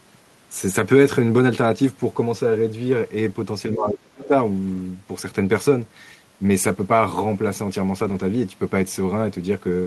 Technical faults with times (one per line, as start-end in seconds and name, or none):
3.72-4.32 speech suppressed in double talk
4.21-4.28 other side's voice leaking through
4.73-4.79 lost packet rebuilt from error correction
7.99-8.21 lost packet rebuilt from error correction